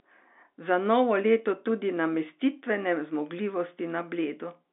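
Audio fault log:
Nothing stood out on listening to this clip.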